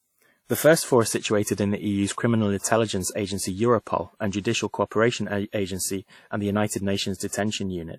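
Throughout, the speech sounds ringing and washy, with hiss breathing along with it and nothing above 17.5 kHz. This is likely WMA compression at a low bitrate, near 48 kbps.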